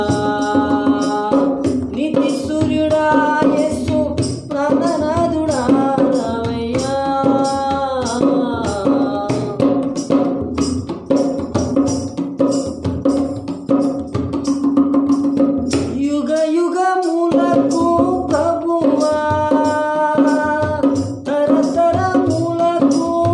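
Nothing is technically wrong with the audio; it has no faults to report.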